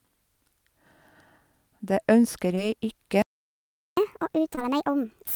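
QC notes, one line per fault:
2.55–2.59 s and 4.55–4.59 s, short concealed packet loss: about 20 ms of speech arrived too late each time, so the decoder extended the preceding sound and blended back, leaving a brief smear.
3.22–3.97 s, playback stall: the speech halts mid-flow for about 0.75 s of silence, likely because the player ran out of buffered data or its thread was blocked.
3.97 s to end, catch-up at higher speed: the player resamples its backlog at 1.5 times normal speed, so the speech runs faster and sounds about seven semitones higher until the clip ends.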